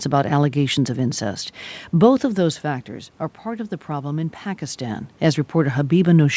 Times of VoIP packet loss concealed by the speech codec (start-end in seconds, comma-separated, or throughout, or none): none